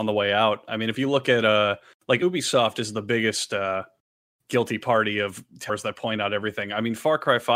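At 2.18 to 2.22 s and again at 5.66 to 5.70 s the speech is broken by a short chirp, squawk, click or hole lasting about 40 ms, the sign of damaged data in a compressed stream. At each point part of the encoded data was corrupted, so the decoder misread the affected frames, lost sync and searched for the next valid frame header. What comes out during that search is a brief garbled sound or gap rather than the intended audio.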